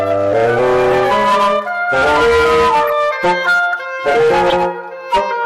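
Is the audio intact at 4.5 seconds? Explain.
No. A corrupt frame was decoded from 4.48 to 4.53 s. Flipped bits in the compressed data were played anyway, so misread codes and gains put energy at wrong frequencies. The result is a brief chirp, squeak, blip or burst of noise peaking around -5 dBFS, and its length fits a couple of damaged frames.

Hard clipping also runs through this moment and the whole clip. The signal is driven about 12 dB past what the chain can pass, so around a fifth of samples have their peaks cut flat, adding high harmonics heard as a harsh fuzz on loud sound.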